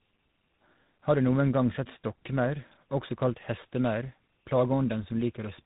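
From start to finish, the speech carries tandem speech coding. It was coded by two speech codecs in a row. The path ran from GSM full rate at 13 kbit/s, through G.711 mu-law at 64 kbit/s, into G.726 at 32 kbit/s. Each coder had to rework audio the one before had already degraded. The result sounds rough, muffled and warbly. Nothing remains above 3.8 kHz. Sibilants and other bright consonants lose their edge.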